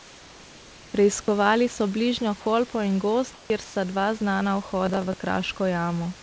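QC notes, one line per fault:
0.00–0.94 s, 3.34–3.50 s and 3.64–3.76 s, comfort noise in place of the background: the room background turns into a flat, featureless hiss, about 2 dB quieter at first, about 5 dB quieter next, and about 2 dB louder just before "dva znana". This likely comes from discontinuous transmission, with the receiver synthesising noise while the sender sent nothing.
4.86–5.20 s, processor overload crackle: right after "dva znana" a gritty, tearing crackle rides on the sound for about a third of a second. Around ten buffers in a row, each roughly 7 ms, missed their deadline and were filled with stale audio, whose hard edges click.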